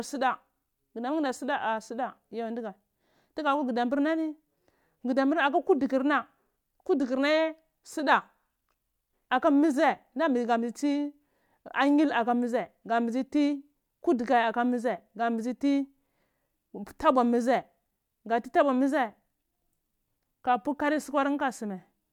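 No technical faults are audible.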